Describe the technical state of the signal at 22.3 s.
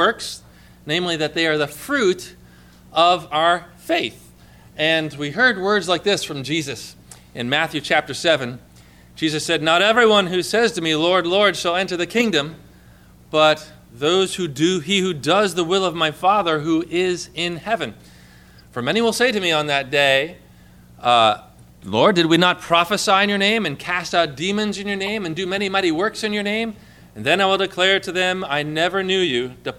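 A corrupt frame decoded sits at 22.34 s, a single short blip lasting roughly one compressed frame. Some bits inside that frame were damaged, yet the decoder still played it, so misread gains and spectral codes briefly placed energy at frequencies where the sound had none. The result is a quick chirp or burst of noise, with the stray energy peaking at roughly -20 dBFS.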